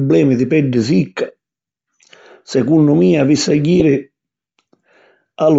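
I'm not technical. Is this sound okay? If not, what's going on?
No. Throughout the recording the speech has a breathy, grainy edge, with a fizzy, artificial quality in the upper range where crisp detail should be. This is likely Bluetooth LC3 compression, the codec used by Bluetooth LE Audio. To save data, it discards much of the high-frequency detail in each short slice of sound and fills the gap with generated noise. That substituted noise is the grain you hear on the speech.

At 3.8 s there is a brief hiccup where the sound momentarily turns smeared and noisy. This is a lost LE Audio frame: one 10 ms packet of audio never arrived. The decoder covered the gap by reusing the previous slice of sound with its detail scrambled. Because the loss is so short, it comes across as a small rough blip rather than a dropout into silence.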